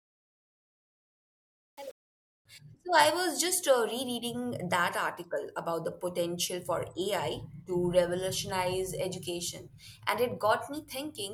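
Gritty grain fills the opening from 0.0 to 2.45 s as the speech fades in. This is truncation distortion on a fade: the gain stage rounded without dither, which points to only 7 bits, stepping the waveform coarsely.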